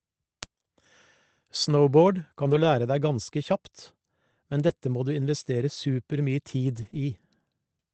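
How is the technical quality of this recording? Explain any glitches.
The recording carries the ordinary coding noise of a low-bitrate call codec, with nothing above 8 kHz. Several distinct glitches sit on top of it.

Word clock ticks: About seven single-sample ticks occur at a steady spacing of roughly one and a half seconds, from 0.43 s to 7.37 s. The receiving device ran on its own clock, off by something like 15 parts per million from the sender's. Each time the two clocks slipped past each other, one sample was dropped or repeated. You hear sharp clicks of uneven strength at a regular rate. On a spectrogram each tick is a thin vertical line spanning the full band. In the waveform it is a one-sample step.

Lost packet rebuilt from error correction: This happens at 2.43–2.65 s (120 ms, which fits six 20 ms packets), at 4.69–4.71 s, at 6.77–6.87 s (60 ms) and at 6.93–6.95 s. In each case the next packet carried a low-bitrate Opus copy of the lost audio, and the decoder played that copy. 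There is no gap, but those stretches sound grainier and noisier. On a spectrogram they show as smeared, fuzzier harmonics, with more noise between them.

Short concealed packet loss: Two 20 ms holes, at 4.67–4.71 s and 6.89–6.93 s, were filled by extending the preceding sound, then blending back into the real signal. Each is heard as a brief smear or wobble. In the first, a rebuilt packet overlaps the end of the hole. In the second, a rebuilt packet follows directly.

The call path itself is consistent with Opus at roughly 24 kbps. It shows on a spectrogram as a hard ceiling at 8 kHz.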